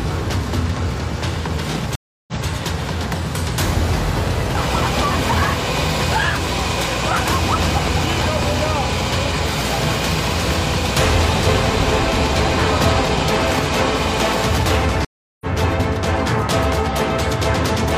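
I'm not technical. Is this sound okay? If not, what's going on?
No. The sound has two stream reconnects, at 1.95 to 2.46 s and at 15.05 to 15.47 s. The connection dropped, the player went quiet for about a third of a second, then reconnected and picked up mid-stream. What sets this apart from a simple dropout is where it resumes: the first time it jumps back and repeats about 0.19 s, and the second time it skips ahead, losing roughly 0.4 s.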